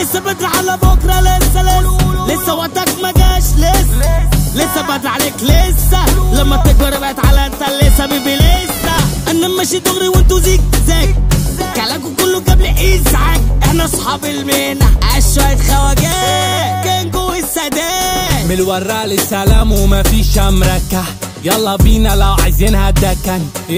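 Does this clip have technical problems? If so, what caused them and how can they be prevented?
Yes. From 7.48 to 8.31 s a hard, raspy buzz at about 217 Hz, rich in harmonics and about 21 dB below the sound, is GSM phone buzz: a nearby 2G phone's steady call bursts were rectified by the audio circuit. Keep phones away from the recording gear.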